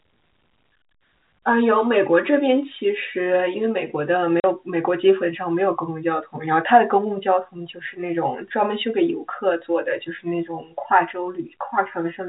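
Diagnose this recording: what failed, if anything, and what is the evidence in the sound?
The network stage failed at 4.4 s, where the audio drops to dead silence for 40 ms, with hard edges. That length fits two 20 ms packets lost in transit, so this is packet loss filled with silence, heard through the narrow G.711 telephone band.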